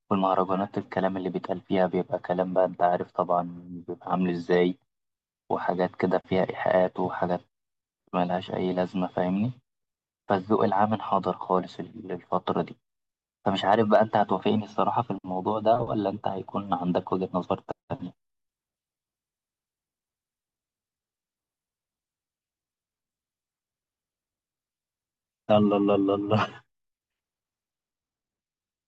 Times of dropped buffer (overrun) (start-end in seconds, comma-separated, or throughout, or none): none